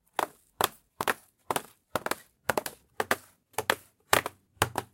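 A short recording of sounds with two isolated bit error spikes, at 1.03 s and 2.49 s. Each is a single sharp, broadband tick peaking at about -11 dBFS, unrelated to the surrounding material and gone almost instantly. The mechanism is a flipped bit in memory or on a digital link: one or two sample values jump by a power of two and snap back. The extreme brevity suggests one or two corrupted samples at each point.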